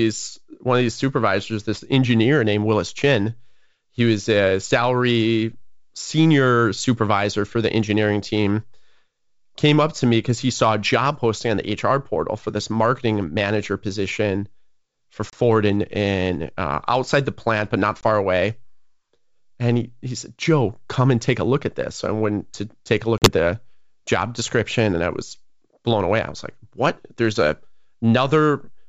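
At 15.30 to 15.35 s, just before "in in uh outside", at 18.01 to 18.04 s after "the plant but not", and at 23.18 to 23.29 s between "went to take a" and "the job description and", packet loss on an ADPCM call cuts hard-edged silent holes of about 30, 20 and 40 ms, each fitting a few lost packets. The decoder's predictor and step size then lag the sender's, so sound resumes with brief, slight distortion. A waveform shows flat gaps with abrupt edges; a spectrogram shows blank vertical stripes across the G.722 wideband band.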